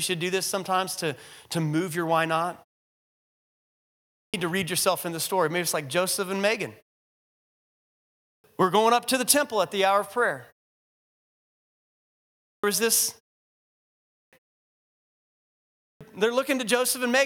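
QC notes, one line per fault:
3.73, 7.82, 12.01, 13.74 and 15.39 s: clipped start after a pause. After gaps of 0.6 to 1.6 s, roughly 0.6 s of each onset is lost before "to read yourself in", "we're going up to" and "was this", because the output device sleeps during silence and is slow to wake.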